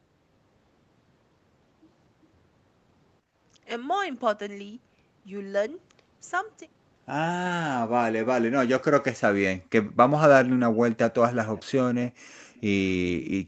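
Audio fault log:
3.21–3.36 s and 12.24–12.45 s, background gated by the echo canceller: the room sound is pulled down for about 150 ms each time, by about 14 dB in the first dip and about 38 dB in the second, almost to silence. The canceller clamped the microphone while the far end was playing, then released. On a spectrogram the faint noise floor below the 8 kHz band edge thins into a short pale gap; the waveform shows the low-level room sound necking down and recovering.
11.55–11.63 s, echo leak: a brief, faint copy of earlier sound arrives about 0.45 s late, roughly 25 dB under the direct speech. It is likely that the far end's echo canceller failed to remove all of the loudspeaker sound its microphone picked up and sent it back. On a spectrogram a weak ghost of earlier harmonic patterning appears under the current signal; the waveform shows only a slight extra ripple.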